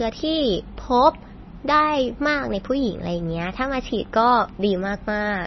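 Throughout the speech, nothing is heard above about 5.9 kHz, and the remaining sound is heavily watery and swirly, with smeared attacks. The likely cause is MP3 compression at a very low bitrate, about 24 kbps. A plain low-pass filter would dull the treble cleanly, without this flickering.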